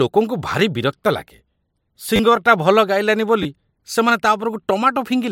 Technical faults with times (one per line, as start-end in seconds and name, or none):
2.16-2.19 repeated buffer
3.43-3.45 repeated buffer